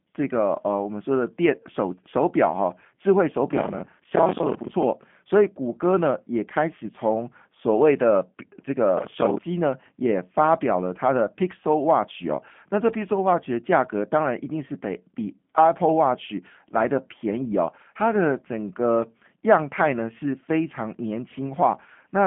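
The whole thing runs through a G.729 codec, and the damage is plainly audible: nothing above 3.5 kHz, with a rough, synthetic edge that fits 8 kbit/s voice coding. From 8.98 to 9.38 s there's processor overload crackle, where many short buffers, around 10 ms each, miss their deadlines and get filled with stale audio, leaving a gritty tearing burst.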